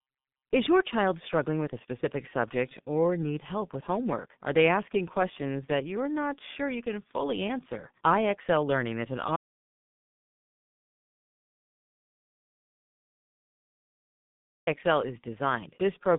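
From the start, the speech carries heavy G.723.1 codec damage. The 30 ms frames and slowly updated voice model smear consonants and leave a hoarse, muffled tone, which fits a rate of about 6.3 kbit/s. The sound is confined to a telephone band of roughly 150 Hz to 3.6 kHz. A spectrogram shows an empty region above 3.7 kHz across the whole clip, with blocky, frame-stepped harmonics below it.

At 9.36 s, right after "is an", an audio dropout to silence begins and lasts until 14.67 s, about 5.31 s. The input was likely lost, through a disconnected device, a failed link or an accidental mute, while recording continued. The sound stops abruptly and returns just as suddenly, with no room tone in between. On the waveform this is a flat line, and on the spectrogram it is a fully blank vertical band.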